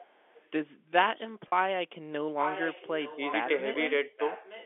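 Echo leak, 0.0 to 0.5 s: a faint delayed copy of the speech, about 30 dB down, trails the main signal by about 0.86 s. The far end's echo canceller likely failed to remove all of its loudspeaker's sound from its microphone, so the residue came back down the line.

Speech suppressed in double talk, 1.15 to 1.3 s: the level dips by about 15 dB in brief bites totalling roughly 50 ms. It sounds like the talker momentarily ducking, likely because an echo canceller mistook simultaneous talk for echo and attenuated it.

Packet loss with pitch repetition, 1.49 to 1.52 s: 40 ms of audio is missing, which fits two lost 20 ms packets. The receiver bridged the gap by repeating the last pitch cycle, so the sound briefly holds with a slightly buzzy, sustained quality before normal audio resumes.

Speech suppressed in double talk, 1.67 to 2.38 s: a much deeper cut, up to about 40 dB, across most of this 0.7 s span. 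The speech fades to near silence in chunks, likely while the other side is active.

Echo leak, 2.39 to 3.48 s, 3.74 to 3.91 s, and 4.17 s to the end: the same 0.86 s-delayed copy returns, now much louder, about 10, 15 and 20 dB below the speech respectively. The narrow 300 Hz to 3.5 kHz telephone band is audible throughout.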